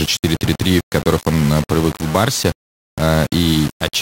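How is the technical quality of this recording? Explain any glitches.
Poor quality: the speech is grainy from start to finish. Throughout, the audio sounds like low bit depth without dither, likely about 4-bit rounding. The error tracks the speech at roughly 15 dB below it, so quiet tails turn gritty. The waveform shows coarse stair-steps, and the spectrogram shows signal-following broadband hash.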